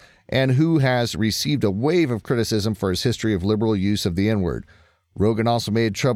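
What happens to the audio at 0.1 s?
Nothing goes wrong at 0.1 s; the audio plays through that moment intact, with no dropout, click or distortion.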